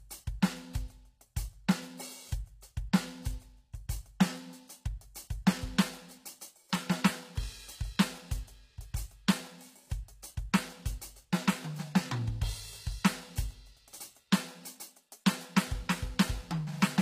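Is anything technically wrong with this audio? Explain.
Yes. Throughout, the sound likely carries HE-AAC compression: the treble is rebuilt from copied lower bands, giving gritty, metallic highs with nothing above 15.5 kHz, consistent with a very low bitrate.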